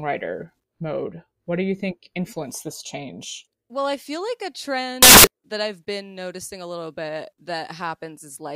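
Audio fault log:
5.02 to 5.27 s, samples built from the wrong bytes: just after "I feel like a", about a quarter second of speech turns into loud, harsh broadband noise. The bytes of each sample were joined wrongly. Fast-changing low bits became the large part of every value. It ends before "that I've been noticing".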